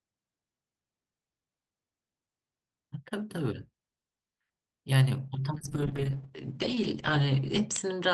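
At 5.54 s the call's bandwidth estimate falls, forcing the encoder from 32 kbps to 9 kbps, with the lowest rate held for 2.1 s. This call bitrate drop codes speech coarsely and narrows the band from 20 kHz to 8 kHz, so it sounds rough, watery and muffled.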